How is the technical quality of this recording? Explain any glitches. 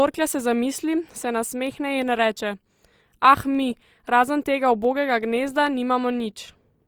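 Five sharp clicks interrupt the speech, at 1.67, 2.53, 3.55, 4.85 and 5.67 s. These are dropped samples. A handful of samples, likely about four, vanish each time. The waveform jumps abruptly to a later value. That step sounds like a brief tick.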